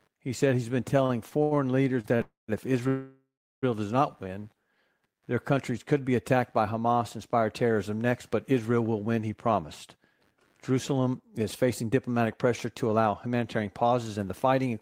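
Throughout the recording, ground currents from the computer's processor or peripherals leak into the audio circuit, adding computer activity noise: a faint buzz pulsing around 100 times a second, roughly 45 dB below the speech.

From 0.97 to 1.58 s, just after "said he's been", packets repeatedly arrived late and the jitter buffer ran dry five times. The result is repeated stalls (stutter): 150 ms of held sound, the longest gap 80 ms, giving a dragging, stuttering delivery.

At 2.01 and 2.16 s, single late packets caused short stalls. The receiver stretched the last sound by 29 ms and then 34 ms, so it lingers briefly with a slight buzz or dip.

Packets were likely held up in transit, producing two call audio freezes. From 2.21 to 2.50 s, the last sound is continued and fades, ending in 160 ms of silence. From 2.88 to 3.64 s, a longer freeze of 742 ms includes 380 ms of silence before the speech resumes at "does not win".

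From 9.45 s to 14.74 s, after "will win he", a jitter buffer speed-up kicks in. The overfilled buffer was drained by cutting tiny pitch-period slices, about 0.4 s in total, so the speech runs 107% fast at unchanged pitch and sounds hurried.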